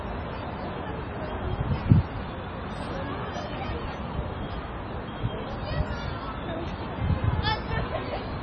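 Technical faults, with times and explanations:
Throughout, MP3 compression: nothing above 9 kHz, and a watery swirl that a clean low-pass would lack, likely from heavy encoding near 24 kbps.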